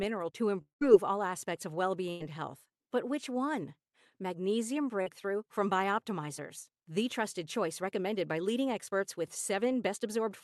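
It's a speech clip carried over a call path, with Opus-style coding and the top end cut off around 12 kHz, and it has three network gaps. From 0.61 to 0.83 s there's a long network dropout. The last sound gets stretched into a fading buzz or hiss and then goes quiet for over a tenth of a second. About 200 ms of audio is simply gone, most likely from packets that never arrived, before it picks up at "all aspects of well". Right after "all aspects of well", from 2.11 to 2.22 s, there's a burst of packet loss. The receiver held the last sound and let it fade for roughly 90 ms, and about 100 ms of real audio is skipped before it resumes. Around 5.02 to 5.08 s there's a short concealed packet loss, where about 40 ms didn't reach the decoder in time. The gap was patched by extrapolating the previous sound and blending back in, which leaves a quick smear or wobble rather than a hard break.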